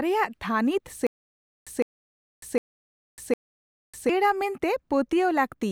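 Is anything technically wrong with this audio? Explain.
Yes, there's a stutter with silent gaps from 1.07 to 4.09 s. A 158 ms chunk of speech plays four times, each followed by about 0.6 s of dead silence, on a steady 757 ms cycle. It's likely a stalled stream replaying its last fragment on each retry, so the real audio from that stretch is lost.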